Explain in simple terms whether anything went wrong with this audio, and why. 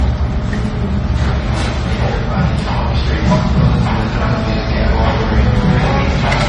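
Something did go wrong, and it lasts through the whole clip: the audio shows signs of transcoding between lossy codecs. Nothing is heard above about 10.5 kHz, so the top end sounds dull and closed-in. On top of that, two different kinds of compression damage are heard together. A single compressed copy would show one consistent texture. This mix likely comes from an MP3 that was later re-saved as Vorbis.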